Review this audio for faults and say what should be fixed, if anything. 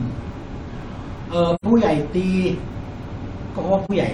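There's AAC frame loss with muting in this speech, twice: a soft dropout from 1.55 to 1.65 s, and a shorter one from 3.85 to 3.91 s. Each time the decoder zeroed the missing spectrum, and the overlapping windows faded the sound down and back up instead of cutting it, so you get a rounded dip. The first gap is about 85 ms, which fits two lost frames. The second is about 43 ms, which fits a single frame, with the longest silent stretch around 40 ms. To prevent it, protect the stream against packet loss or have the decoder conceal lost frames rather than mute them.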